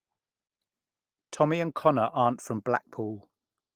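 At 2.21 to 2.23 s, just before "back from", there is a lost packet rebuilt from error correction. The sound never drops out. Instead, 20 ms of speech turns briefly rougher and noisier. This fits a single lost packet replaced by the lower-quality backup copy carried in the next one.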